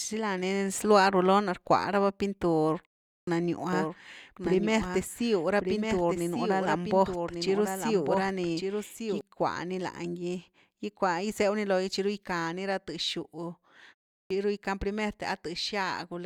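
At 3.21 s, after a 0.42 s pause, a clipped start after a pause swallows about 63 ms as the sleeping output wakes; the waveform jumps abruptly from flat silence. From 3.73 to 9.21 s, a doubled audio track, likely a second slower capture path, adds a full-band copy about a second late and roughly 5 dB quieter. It looks like repeated spectrogram patterns with no decay, starting and stopping abruptly. At 14.24 s, after a 0.38 s pause, about 65 ms is lost again, leaving a hard onset.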